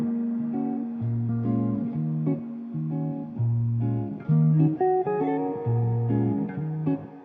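No technical fault can be heard in this recording of sounds. Nothing in it needs a timestamp or a cause.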